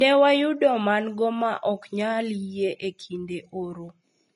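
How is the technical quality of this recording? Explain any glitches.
The recording is compromised by plainly audible codec damage that runs through the whole speech clip.

Throughout, the sound is hissy and grainy, consistent with Vorbis compression at low quality, likely the cause here. The encoder keeps a smooth spectral envelope but quantises the treble detail so coarsely that it turns into noise of similar energy. That roughens tones and smears consonant onsets. The damage points to a bitrate around 30 kbps. On a spectrogram, energy stops abruptly at about 10.6 kHz, and the upper bands look speckled and blotchy rather than finely textured.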